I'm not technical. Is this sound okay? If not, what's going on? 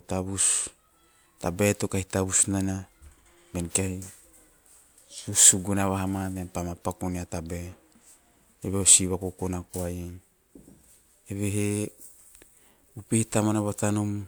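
Yes, it sounds fine; there's nothing wrong to report.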